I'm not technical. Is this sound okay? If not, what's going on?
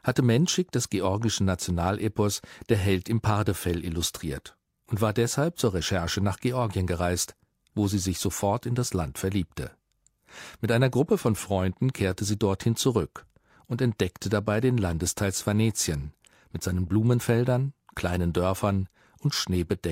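Yes, this sound is okay; nothing is going wrong in it.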